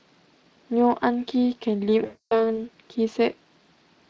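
At 2.05 s the speech drops into VoIP packet loss concealed by the speech codec: about 260 ms of audio went missing, and the decoder kept guessing from its last pitch and filter, so you get a buzzy or noisy smear that fades, still sounding weak until about 2.60 s.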